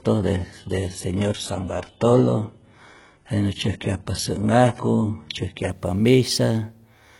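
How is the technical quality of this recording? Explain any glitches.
The quality is poor at the start and then improves, because of an adaptive stream starting at a low bitrate. From 0.0 to 5.7 s the speech sounds dull and smeared, with a synthetic, fizzy top end and stronger codec artefacts, which points to a low-bitrate HE-AAC version around 12 kbit/s. At 5.7 s the player, having measured the connection, switches to a better version, consistent with AAC-LC near 96 kbit/s, and clarity jumps with no gap. On a spectrogram, nothing appears above 11.5 kHz before 5.7 s, and higher-frequency detail starts abruptly there. The waveform runs continuously through the switch.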